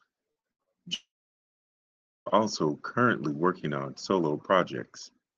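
From 0.31 to 0.69 s, the speech turns choppy and robotic. This is repeated packet loss. Four short holes fall in this stretch, the longest about 77 ms. Each one is patched by stretching the last bit of sound forward. About half the span ends up concealed this way. Pieces of the speech are simply gone.

At 0.94 s the incoming audio stops. It returns at 2.29 s. This is most likely a long network dropout. Nothing arrived for about 1.3 s. A brief tail continues the last sound, then fades. Roughly 1.2 s of plain silence follows. When the audio resumes, the missing stretch is not recovered. The speech picks up later. Throughout, the sound is band-limited to about 8 kHz, as the call codec delivers it.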